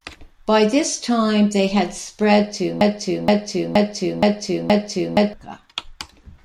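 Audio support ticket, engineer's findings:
Broken-record loop, 2.81 to 5.33 s, right after "they had spread to". A 0.47 s fragment repeats exactly, five times, back to back. Likely a stalled player or stream resending its last held chunk. The intended speech there is lost.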